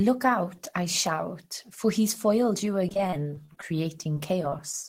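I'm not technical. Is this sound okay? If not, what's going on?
No. From 2.87 to 3.63 s, and again from 4.04 to 4.84 s, the speech turns choppy and robotic, with little pieces of sound missing. This is repeated packet loss (robotic sound): bits of the audio failed to arrive in time, over and over. Each time, the system covered the hole by stretching out the last bit of sound it had, which gives that mechanical quality. The first stretch is worse, with the longer dropouts, up to about 27 ms each.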